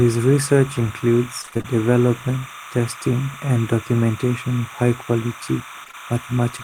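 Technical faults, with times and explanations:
Throughout: timecode bleed, a warbling chirp around 1 and 2 kHz about 15 dB below the speech, from 29.97 frames-per-second linear timecode leaking in.
1.41–1.66 s: repeated packet loss (robotic sound), six gaps up to 29 ms patched by extending prior sound, about half the span concealed, leaving choppy speech with pieces missing.
5.84–5.95 s: short concealed packet loss, three consecutive 20 ms holes, each filled by continuing the last sound then blending back, giving a brief smeared wobble.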